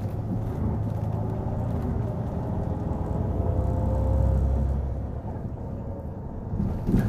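No technical faults can be heard anywhere in this recording of sounds. Nothing in the audio calls for correction.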